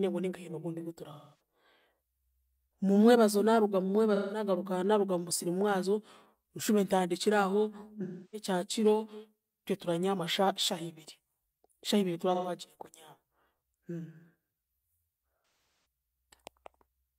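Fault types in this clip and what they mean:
AAC frame loss with concealment: five short patches where the speech turns smeared, noisy and phasey instead of dropping to silence. They fall after "ogundi ogu" at 1.12 s, after "naaruga mu" at 4.15 s, at 8.03 s, after "shahiibiri tura" at 12.34 s, and in a broken-up stretch at 15.42 s where the longest run lasts about 200 ms. Chunks of the AAC stream between 128 and 299 ms long went missing, and the decoder filled each gap by reusing the last good spectrum.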